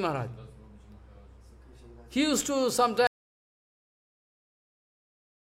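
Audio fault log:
3.07 s to end, audio dropout to silence: sound cuts off abruptly into silence with no room tone, unlike a fade or gate, likely a lost input link.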